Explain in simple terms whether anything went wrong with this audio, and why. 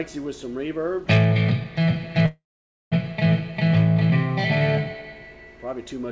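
At 2.26 s the sound stalls until 2.94 s: a brief fading buzz, then half a second of silence, before it picks up exactly where it stopped. That's a call audio freeze, likely from late packets draining the call's buffer. Nothing's lost, just delayed.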